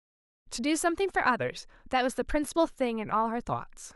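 No technical faults can be heard in this speech.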